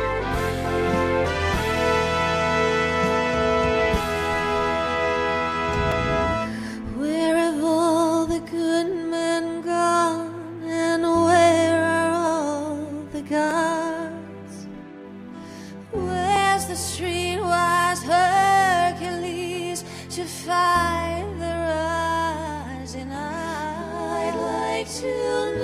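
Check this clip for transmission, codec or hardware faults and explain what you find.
Three brief dropouts occur, each a block of digital silence. They fall at 5.92 s, 13.51 s and 16.36 s. The gaps last about 3.8 ms, 0.95 ms and 1.45 ms. The audio cuts straight to silence and back with no fade. Being so short, these register as ticks rather than holes. They point to output buffers that were not filled in time. The 1.45 ms gap fits a 64-sample block.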